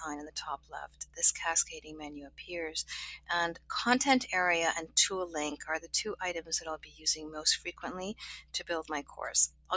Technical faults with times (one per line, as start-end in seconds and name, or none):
0.00-9.76 noise suppressor applied to music or sounds
0.57-1.18 sound cut by the noise suppressor
2.26-2.47 sound cut by the noise suppressor
3.54-3.70 sound cut by the noise suppressor
6.77-7.06 sound cut by the noise suppressor
7.58-7.83 sound cut by the noise suppressor
8.14-8.54 sound cut by the noise suppressor
9.03-9.19 sound cut by the noise suppressor
9.48-9.71 sound cut by the noise suppressor